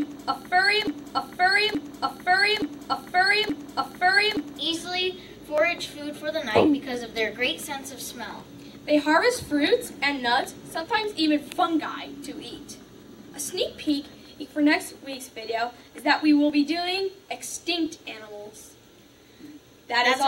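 A broken-record loop runs from the very start of the clip to 4.59 s, already under way when the audio begins. A segment of sound about 0.87 s long repeats four times, back to back and identical each time, before normal audio resumes. This likely comes from a player, encoder or stream that stalled and kept resending the last fragment it held. Whatever should have been heard during those seconds is missing.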